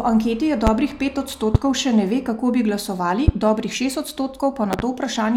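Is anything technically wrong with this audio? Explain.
Yes. Loud pops interrupt the speech four times. They come at 0.67 to 0.70 s after "anketi jih", at 1.55 to 1.58 s before "še ne ve kako", at 3.28 to 3.31 s between "ve kako bi glasovali" and "dobrih šest", and as a double pop at 4.73 to 4.82 s. Each sits roughly 15 dB above the speech, which continues underneath. The cause is likely a sudden voltage pulse from a switch, plug, static or driver glitch.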